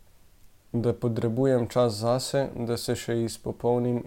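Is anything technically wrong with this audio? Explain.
No, nothing technically wrong can be heard in this speech recording.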